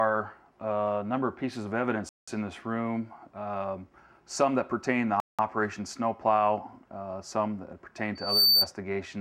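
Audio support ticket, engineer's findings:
Likely Bluetooth stall: link interference delaying packets, headphone buffer running empty until retransmits land. Audio drops to silence twice, 2.09–2.28 s (184 ms) and 5.20–5.39 s (186 ms), then resumes.

Loudspeaker feedback squeal: mic picking up its own loudspeaker, loop gain above unity at 4.6 kHz. Single tone at 8.15 s, swelling over roughly a third of a second to about 10 dB above programme level, gone by 8.69 s.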